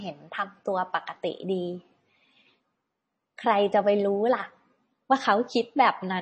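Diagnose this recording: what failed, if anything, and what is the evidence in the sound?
The fault sits at the codec stage. Throughout the speech, nothing reaches above 8.3 kHz. The damage is plainly audible, with a watery, swirly texture. This is likely MP3 compression, and the sound fits a bitrate near 32 kbps. Starved of bits, the encoder cuts the treble and drops weak frequency lines.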